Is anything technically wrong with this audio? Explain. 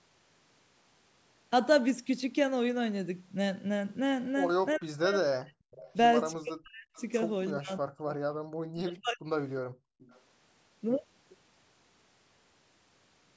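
Yes, this speech clip has three kinds of echo-canceller trouble, all clustered between about 4.8 and 10.2 s.

Speech suppressed in double talk shows up at 4.79–5.57, 6.36–6.91, 7.53–8.15 and 8.71–9.33 s. Each time the voice suddenly sinks, at its worst by roughly 40 dB, for around half a second (a bit longer in the last one). The likely cause is that the far end was talking at the same time, and the canceller, unable to tell the local talker from the loudspeaker echo, just clamped everything down.

There's also an echo leak at 5.71–5.94, 6.96–7.04 and 9.99–10.2 s. You get short, faint scraps of voice trailing the real thing by 358 ms, sitting some 25 to 30 dB under the main speech. That's likely a speakerphone on one side whose canceller didn't fully scrub what its microphone picked up, so a bit got sent back.

Last, the background is gated by the echo canceller from 9.62 to 9.99 s. The room tone drops by about 35 dB for roughly 0.4 s, a brief hole in the ambience, then comes back, right before the final echo scrap. 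That's the canceller slamming the mic down while the loudspeaker played and then releasing it. The normal call high-pass and the band ending at 8 kHz are just the call path, not faults.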